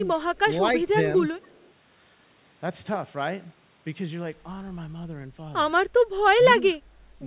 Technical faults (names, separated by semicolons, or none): speech suppressed in double talk; echo leak